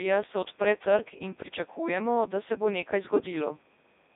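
From start to finish the speech has passed through the Codec 2 vocoder, heavily damaged, with a texture that fits its top 3.2 kbit/s mode. Only pitch, voicing, energy and a coarse spectral envelope survive. The decoder rebuilds the voice from summed sine waves, so it sounds robotic and buzzy. On a spectrogram the energy sits between about 150 Hz and 3.7 kHz, with nothing above 3.8 kHz. Harmonics appear as unnaturally regular stripes, and the waveform no longer matches natural speech in shape.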